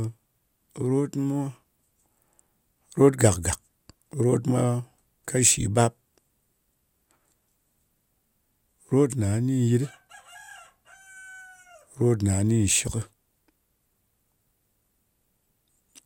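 Nothing in this speech recording stands out as a technical fault, so there's nothing here to flag.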